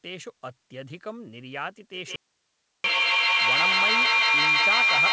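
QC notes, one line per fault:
1.93–5.12 s, feedback howl: A second device in the room closes a microphone-to-loudspeaker loop with more than unity gain, so each pass adds level. The sound narrows to a ring near 2 kHz, pulsing at roughly 150 ms, and climbs to about 12 dB above the speech until the clip ends.
2.16–2.84 s, audio dropout to a faint residue: The wanted signal vanishes abruptly for about 684 ms while the path stays live, leaving only hiss some 50 dB under the speech level. The cause is likely a break upstream of the still-open input, not a pause or fade.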